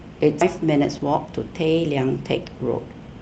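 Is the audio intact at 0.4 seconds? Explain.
No. A skip ahead at 0.41–0.43 s drops roughly 0.7 s of speech; playback jumps forward with no gap, showing as an abrupt waveform splice without any silent stretch.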